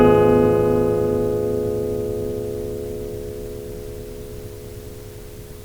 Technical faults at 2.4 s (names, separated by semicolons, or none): overlap-add ripple